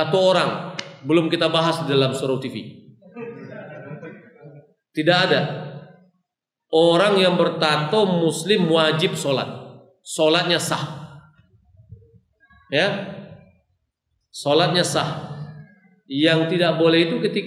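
Nothing stood out on listening to this audio.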